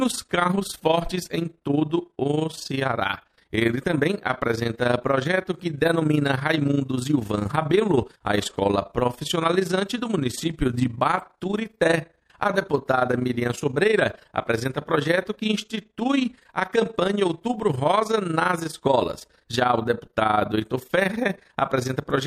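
Overlap-add ripple runs through the whole clip: the level pumps by about 11 dB at around 30 Hz, once per frame, because the windowed frames were rejoined with an overlap that doesn't sum to constant gain. It sounds like a fast, rough flutter on the sound.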